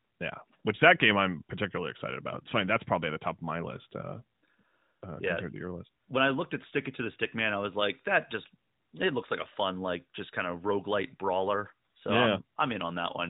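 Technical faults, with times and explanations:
No technical faults can be heard in this speech. It comes through the AMR narrowband mobile codec, so nothing above about 3.8 kHz remains and the codec damage is light, which fits AMR-NB's top 12.2 kbps mode.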